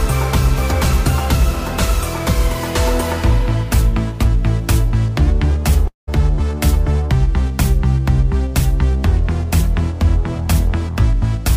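At 5.87 s the sound fades into a short buzz, then about 0.14 s of silence. It resumes at 6.09 s with roughly 0.2 s missing, likely a long network dropout.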